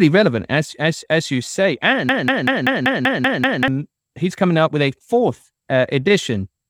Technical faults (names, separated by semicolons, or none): broken-record loop